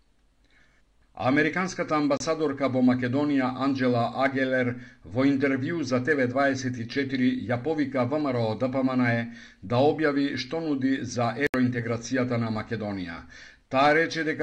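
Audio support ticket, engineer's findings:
Likely Bluetooth stall, two events: packets held up on the wireless link, receiver buffer drained, playback halted until resent data arrived. Sound drops to silence for about 28 ms at 2.17–2.20 s and 72 ms at 11.47–11.54 s, then resumes where it stopped or slightly later.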